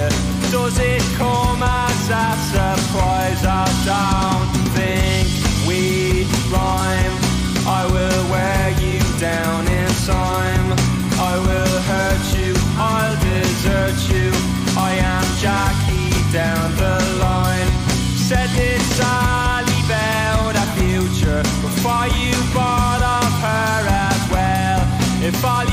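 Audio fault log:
16.18 s, block of digital silence: a single sharp tick, too brief to register as a gap. For about 0.52 ms the signal drops straight to silence and then jumps back, with no fade on either side. Those two abrupt steps in the waveform are what the ear picks up as a click. The missing samples point to an output buffer that wasn't filled in time, or to a calculation that produced invalid values.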